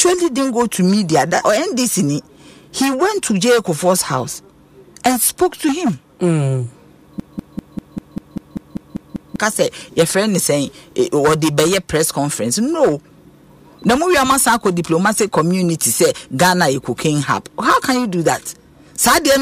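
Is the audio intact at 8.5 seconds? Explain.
No. From 7.20 to 9.39 s the same 196 ms fragment of sound plays back to back, 11 times in a row, a stuttering broken-record loop. The likely cause is a stalled player or stream resending its last buffer, so the intended audio there is lost.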